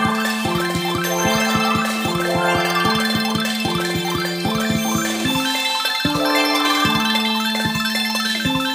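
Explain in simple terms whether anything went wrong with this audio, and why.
Something did go wrong: the whole clip has a wrong sample rate fault. The audio is played back three times faster than it was captured, so it runs at triple speed and sits about 19 semitones higher, more than an octave and a half up, from start to finish. Nothing converted the recording to the playback rate, so speed and pitch rose together. The factor of three fits audio recorded at 16 kHz being played at 48 kHz.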